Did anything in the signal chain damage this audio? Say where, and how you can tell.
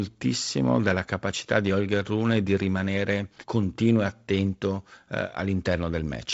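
No, nothing in the signal chain damaged this speech; it has simply passed through G.722 wideband telephone coding, with nothing above about 7.7 kHz.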